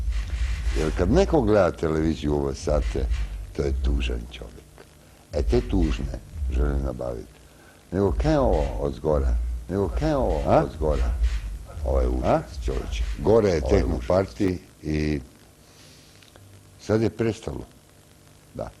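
From 9.68 s to 14.48 s a doubled audio track appears: a second full-band copy of the sound runs about two seconds behind, at roughly the same level, dry and starting and stopping abruptly. The likely cause is a slower second capture path mixed back in.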